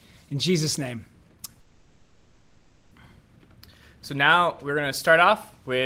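A long network dropout runs from 1.60 to 2.92 s. The last sound is stretched into a fading buzz or hiss for about 1.3 s, likely because the receiver concealed a stream gap. The audio then resumes further on, with that stretch missing.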